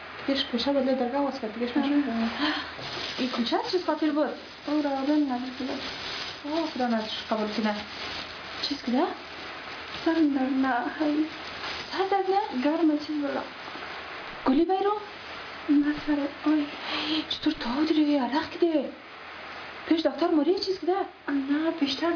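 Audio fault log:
Nothing here calls for a log entry; the audio simply runs along without a single glitch worth writing down.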